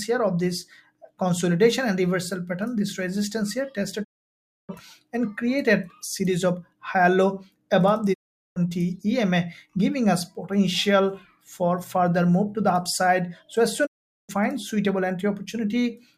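A digital broadcast dropout occurs three times: the receiver lost good frames and muted until they returned. The sound fades out over 20 ms to silence at 4.03–4.71 s, 8.12–8.58 s and 13.85–14.31 s, then resumes with the intervening programme missing.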